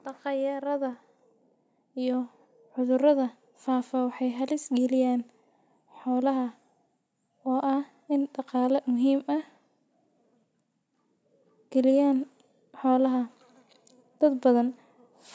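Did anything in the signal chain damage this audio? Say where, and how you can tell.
Yes, there's automatic gain rising in the call processing stage. From 0.22 to 4.61 s the speech and the background swell up together, about 8 dB overall, as the AGC decides the input's too quiet and slowly ramps its gain, lifting noise right along with the voice.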